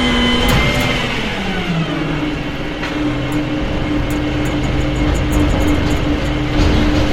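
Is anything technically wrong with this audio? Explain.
Yes, there's a doubled audio track from 4.22 s to the end. A second copy, about 5 dB quieter and trailing by roughly 0.4 s, cuts in abruptly with no decay. It's likely a slower capture path or an out-of-step edit layering the sound twice.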